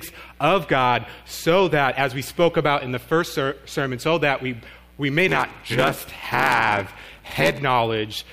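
From 5.27 to 7.59 s there is a block size mismatch (padded). One stage hands over shorter blocks than the next stage reads, which fits a 512-sample read block, and the missing tail of each block is filled with zeros. Every block therefore carries a short silent gap, heard as a buzz at 86.1 Hz. The stretched blocks also make the audio run slower, at 0.861 times normal speed, while its timbre stays.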